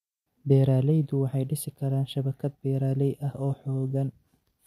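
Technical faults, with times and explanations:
Nothing in the recording stood out as a technical problem on listening.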